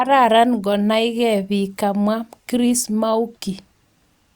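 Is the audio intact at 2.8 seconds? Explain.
Yes, the audio is intact at 2.8 seconds, with no dropout, click, distortion or other technical fault at that moment.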